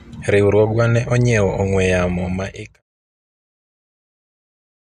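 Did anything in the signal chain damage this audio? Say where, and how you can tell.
No; the speech fades out smoothly by 2.83 s.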